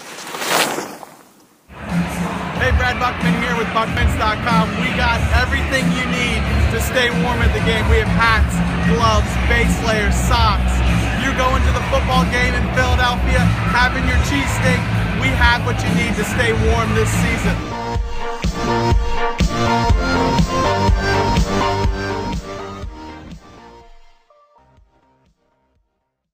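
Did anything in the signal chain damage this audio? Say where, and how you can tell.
No, nothing in the signal chain stood out on listening, and the smooth fade out over roughly the last five seconds sounds like an intentional edit rather than damage.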